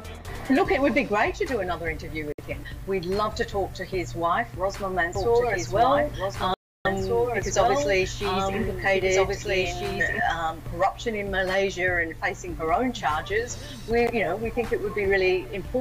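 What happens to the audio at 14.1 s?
Between 14.07 and 14.11 s the sound cuts to 13 ms of silence, then resumes. This is a Bluetooth stall, likely the headphone buffer emptying while interference delayed packets.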